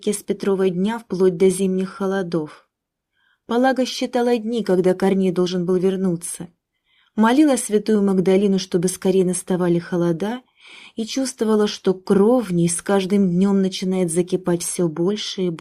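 No faults to report: nothing audible went wrong anywhere in the clip.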